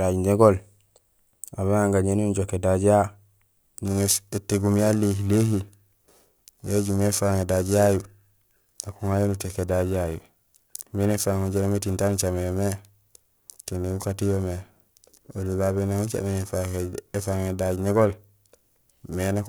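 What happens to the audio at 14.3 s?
At 14.3 s the converter's clock is being shaken by interference at a steady rate of around 1 kHz, periodic clock jitter running from 3.86 s to the end. Each speech component gains sidebands spaced about 1 kHz away, strongest on high frequencies, giving a rough, metallic edge that disappears in pauses.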